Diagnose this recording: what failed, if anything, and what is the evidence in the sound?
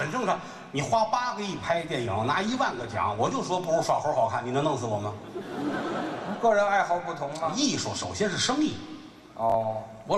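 Call bitrate drop at the codec stage: from 1.13 to 3.59 s the encoder falls from 96 to 22 kbps, so the sound turns coarse and loses its highs.

Chunks out of order at the buffer stage: at 9.50 to 9.54 s a 23.22 ms chunk plays one slot late, leaving a brief jumbled moment.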